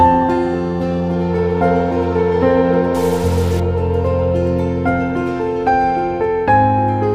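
A stuck bit from 2.95 to 3.60 s: one data bit, likely from a faulty line or converter, is held fixed, adding harsh buzzy distortion and a noise step of roughly −30 dBFS.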